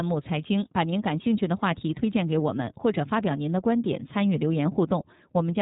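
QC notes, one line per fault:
Throughout: iLBC codec. Nothing reaches above 3.8 kHz, and the speech sounds plainly rough and synthetic because each 30 ms frame's excitation is coded on its own, which fits the 13.33 kbps mode. The spectrogram shows a flat ceiling and blocky, smeared harmonics.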